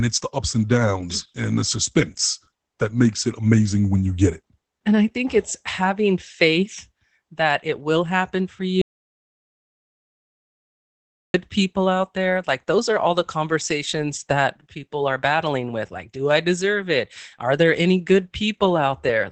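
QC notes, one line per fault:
Throughout: Opus voice compression. Speech sounds muffled, hoarse and slightly robotic, with nothing above 8 kHz. Coarse linear-prediction coding fits a rate near 12 kbps.
8.82–11.34 s: audio dropout to silence. After "it will happen for", sound stops for 2.5 s with no room tone until "people out there". Likely a lost input writing silence.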